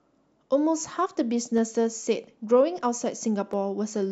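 Sharp single clicks in the speech at 1.58 s and 3.53 s are likely dropped samples, where a tiny fraction of a millisecond vanished and the waveform jumps abruptly. Each click shows as a thin vertical line across the spectrogram and a step in the waveform.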